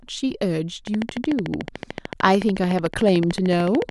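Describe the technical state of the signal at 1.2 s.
At 1.2 s a train of clicks is running, from 0.87 s to the end: regular ticks at 13.6 per second, peaking about 10 dB above the speech, likely interference, showing as evenly spaced vertical spikes and broadband stripes.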